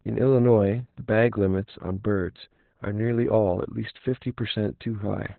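From start to finish, the speech passes through heavy Opus voice compression in SILK mode at a narrowband setting. The sound points to a bitrate near 8 kbps. Nothing survives above about 4.2 kHz, so the speech sounds muffled, hoarse and faintly robotic.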